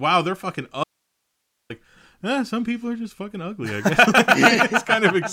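At 0.84 s, after "wow they're fucking", speech cuts abruptly to faint hiss for 0.86 s. This audio dropout to a faint residue likely means the signal was lost on a still-live path.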